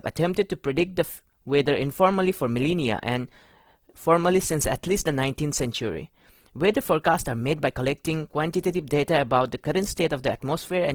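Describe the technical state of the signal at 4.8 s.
At 4.8 s the speech carries Opus compression, present across the whole clip. The music-mode coder is short of bits, so it fills bands with folded or noise-like content, making the sound grainy and rough. This is likely a low bitrate, around 16 kbps.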